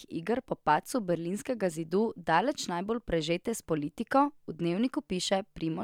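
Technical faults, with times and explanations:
No technical faults are audible.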